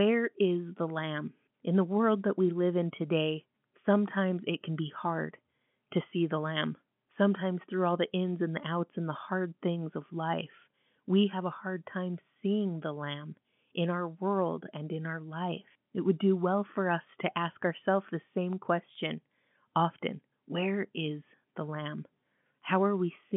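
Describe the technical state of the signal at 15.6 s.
At 15.6 s the speech passes intact, carried through the narrow telephone band of the G.711 coding with no fault present at that moment.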